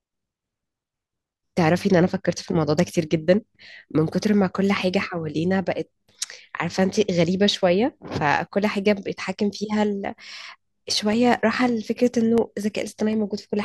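Regular ticks break into the last stretch of this speech recording, from 11.13 s to 13.38 s, recurring every 0.25 s, about ten in all. Each one is a tiny gap of roughly a millisecond where the audio drops to silence, and the sharp edges of those gaps are what make the ticking. The even spacing marks these as periodic USB or driver dropouts: some background task is stalling the bus or audio driver on a fixed cycle, so a sliver of samples goes missing each time.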